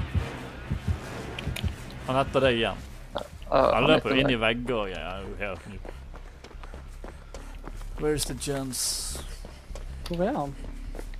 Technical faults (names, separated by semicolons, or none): none